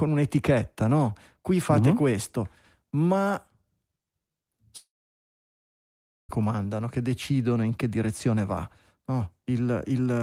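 At 4.77 s the stream was likely interrupted by a long network dropout: no packets reached the receiver for about 1.5 s, so it had nothing to play. The last sound is stretched into a brief fading buzz, and then about 1.4 s of near silence follows. The speech resumes at 6.31 s, but roughly 1.5 s of it is simply gone, so the audio jumps ahead without the missing stretch.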